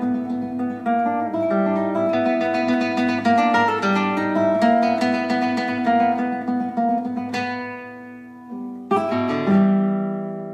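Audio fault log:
No faults found anywhere in this audio.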